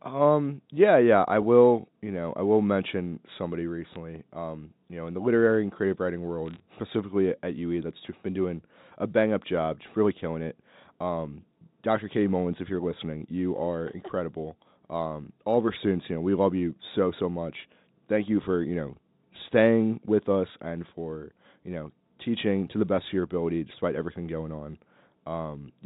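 Bit errors on a digital phone line hit at 3.93 to 3.96 s, after "I will mention somebody", and at 6.46 to 6.60 s, after "literary and creative writing". Flipped bits corrupt single samples in the G.711 mu-law stream. They sound like sharp ticks and crackle over the speech.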